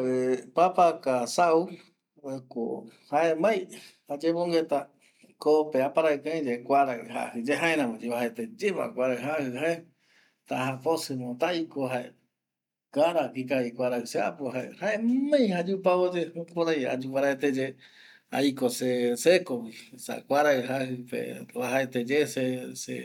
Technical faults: none

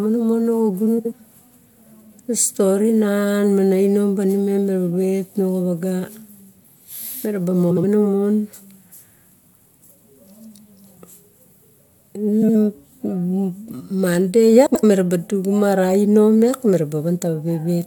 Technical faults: frames out of order

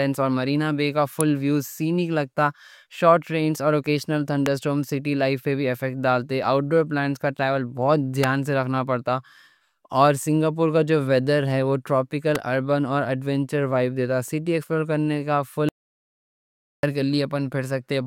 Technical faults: electrical switching spike; audio dropout to silence

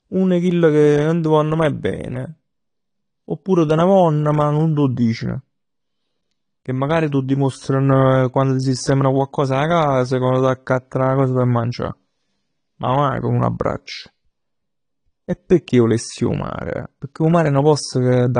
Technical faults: AAC compression

